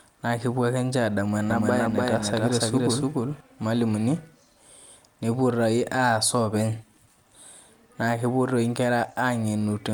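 From 1.50 to 3.40 s a doubled audio track appears: an equally loud copy trails about a third of a second behind, likely captured again by a slower path. Unlike an echo, it neither decays nor adds room colour, and starts and stops abruptly.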